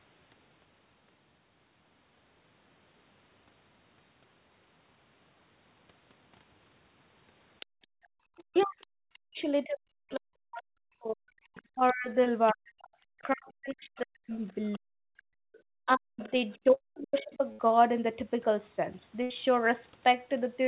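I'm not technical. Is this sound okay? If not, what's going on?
No. There are five separate problems, some overlapping in time.

Other side's voice leaking through: at 7.6 to 9.18 s, 11.55 to 11.93 s, 12.46 to 12.53 s, 13.96 to 14.79 s and 16.2 to 16.58 s, a second, much fainter voice can be heard under the main one. The person recording was probably hearing the other caller on a loudspeaker, and the part of the call software meant to remove that sound from their microphone likely missed some of it.

Background gated by the echo canceller: from 7.66 to 8.24 s, the room sound suddenly drops away almost to silence for about half a second, then comes back. That is the same echo-removing feature reacting to the loudspeaker by turning the microphone down very hard for a moment, taking the background with it.

Speech suppressed in double talk: between 8.52 and 17.4 s, the main speaker keeps dipping, sounding dull or breaking off in pieces, adding up to about five seconds of damage. 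This likely happened because both people talked at once, and the echo-removing feature couldn't tell the speaker apart from the loudspeaker sound, so it turned both down.

Short concealed packet loss: at 12.24 to 12.28 s there is a tiny smear or wobble. A scrap of the call, about 20 ms, arrived too late, so the receiving end patched the hole by stretching the sound just before it, then blended back into the real audio.

Burst of packet loss: at 16.74 to 16.82 s, 17.52 to 17.61 s and 19.23 to 19.32 s, the sound briefly turns into a held buzz or fading hiss and then jumps ahead. Each time a longer chunk of the call, 60 to 80 ms, went missing in transit. The receiving end filled the gap with a fading copy of the last sound, so whatever was in that gap is lost.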